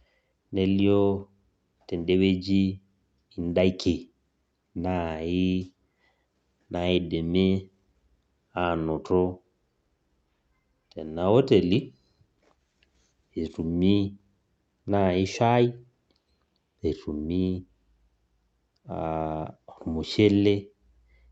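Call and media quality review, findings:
No audible faults found.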